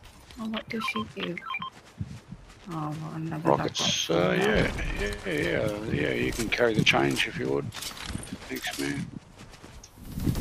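Between 6.14 and 6.64 s the audio turns grainy, a gritty noise riding on the signal for that half-second, and it sounds like a stuck bit. The likely cause is one data bit jammed at a fixed value, so roughly half the samples get knocked off by that bit's weight, around -50 dBFS, in a pattern that follows the waveform. That's what gives the grinding, noise-like texture.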